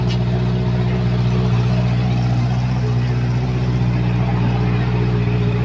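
No technical faults are audible.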